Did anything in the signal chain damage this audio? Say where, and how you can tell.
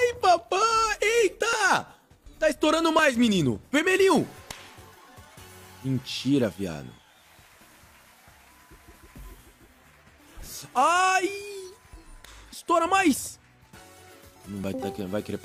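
Yes. There are small forward skips in the sound at 0.39, 1.53, 2.99, 4.18 and 14.64 s, each losing something like 10 to 30 ms with no gap. That's likely a dropped buffer (overrun) at the driver or buffer stage: samples overwritten before they were read, so the edges get spliced together.

Then from 6.86 to 9.84 s the receiver does a digital radio blend to analogue FM and back, cross-fading over about half a second each way. You can hear hiss come in at around 35 dB below the signal while the level stays put.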